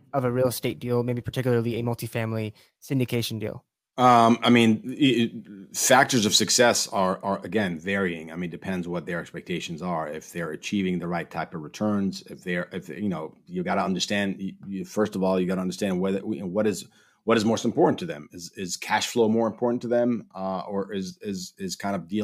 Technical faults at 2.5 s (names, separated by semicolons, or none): none